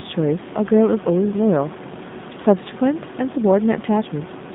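From start to end, the speech sounds rough and synthetic, confined to roughly 150 Hz to 3.7 kHz, and the room noise about 13 dB below warbles, consistent with G.729 coding at about 8 kbit/s.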